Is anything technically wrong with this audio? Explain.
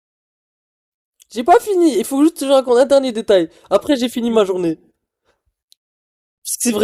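No, nothing technically wrong can be heard in this speech clip. There is no fault to point to at any moment, so there is nothing to explain.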